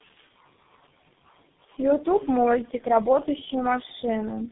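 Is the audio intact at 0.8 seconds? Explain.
No, 0.8 s sits inside tandem speech coding that runs through the whole clip. The speech sounds like it passed through three low-rate codecs in a row, each re-coding the last one's damage. It's rough, muffled and warbly, with nothing above 3.8 kHz.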